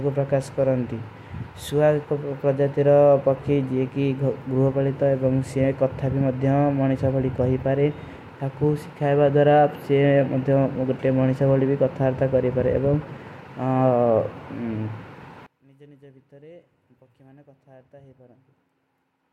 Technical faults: one channel inverted

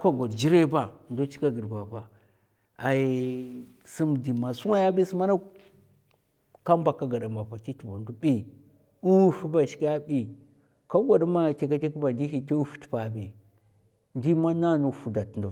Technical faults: none

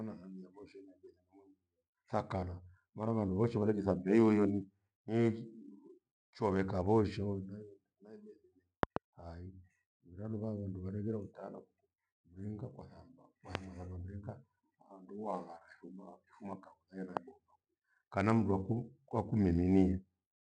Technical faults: loud pop

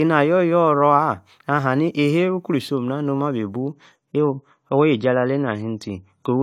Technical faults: adaptive stream at a lower bitrate

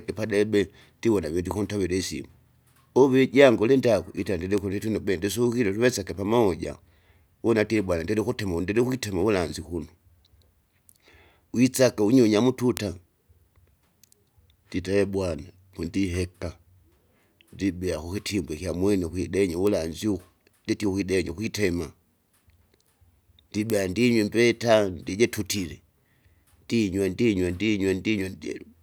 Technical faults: bit error spike

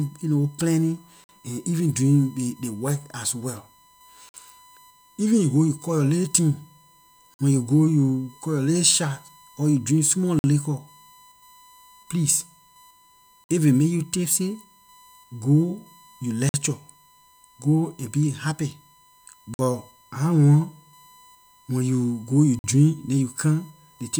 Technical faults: USB whine; gap between chunks

